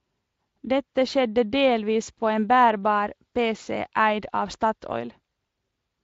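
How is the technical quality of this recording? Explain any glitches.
No glitches can be heard in the recording: the speech comes through a Speex voice codec at what sounds like a fairly generous setting, and the only colouring is the light texture that codec adds.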